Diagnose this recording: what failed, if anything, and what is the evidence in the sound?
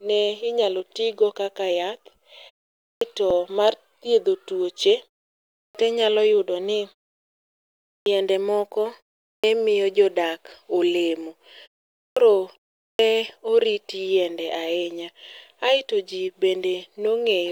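Clipped start after a pause, at the playback device: after each silence, around 0.16 to 0.18 s of onset is missing at 2.84, 5.58, 7.89, 9.28, 11.99 and 12.83 s, for example before "mar thiedho tuoche", "inyalo yudo ni" and "miyo jodak olemo". The device sleeps and wakes late. This differs from muted pauses, where nothing is lost.

Overlap between stream segments, at stream assembly: tiny skips at 3.31 s and 13.30–13.32 s, landing on 2 s segment boundaries. Overlapping timestamps get trimmed, so about 6 to 20 milliseconds of real audio vanish rather than falling silent.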